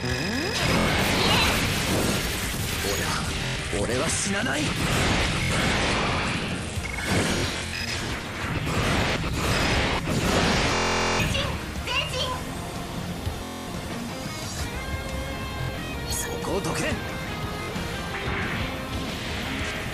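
Bluetooth stutter at 0.80, 3.46, 5.43, 7.38, 10.75, 13.44, 15.62 and 17.63 s: lost or late wireless packets made the receiver replay its last short slice, producing buzzing repeats covering about 46 ms to 0.44 s of lost audio. The longest is at 10.75 s, and the dropouts come in scattered bursts at 7.38 and 15.62 s. After each stutter the sound resumes further along, as if it had kept playing.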